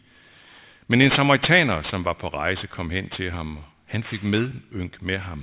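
Aliasing runs through the whole of this speech clip. The sound points to a drop from a 48 kHz rate to about 8 kHz with no low-pass filter first, so energy above the 4 kHz folding point has mirrored back down into the band as false, unrelated tones. Sibilants come out gritty and metallic, with the folded content sitting only moderately below the speech itself. On a spectrogram the energy runs hard up to a sharp 4 kHz ceiling, with mirrored streaks sweeping the wrong way.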